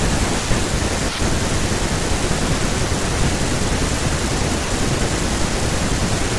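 Nothing in the speech stood out as a problem when listening through the recording.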